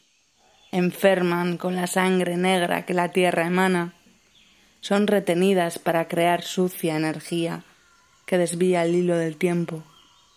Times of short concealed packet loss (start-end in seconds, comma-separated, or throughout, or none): none